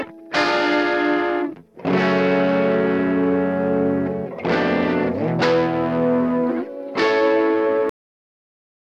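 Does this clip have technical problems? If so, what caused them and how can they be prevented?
Yes. The clip has a cut-off end: the final stretch of buffers was never written out or played back, so the recording path stopped delivering audio before the music had finished. At 7.89 s the music halts mid-sound and falls straight to digital silence, with no natural decay or fade, and that dead silence continues for roughly the last second of the clip. To prevent it, flush and close the recording or export stream fully before ending the session, so every pending buffer reaches the file.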